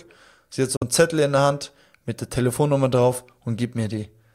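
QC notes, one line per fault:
0.76–0.83 s, Bluetooth dropout: the speech cuts to sudden silence just after "sie hat so", then resumes mid-flow. This is likely from two late packets being dropped.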